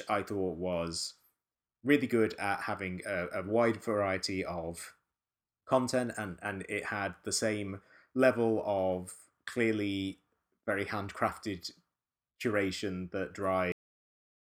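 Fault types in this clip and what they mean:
Cut-off end: the speech just stops dead at about 13.72 s, right in the middle of a sound, as if the final stretch of audio was never written out or played back. There's no natural decay or trailing breath. It falls straight into digital silence, and that flat nothing runs for roughly the last 0.73 s of the clip. It's less like someone finishing a thought and more like the recording got chopped off mid-syllable.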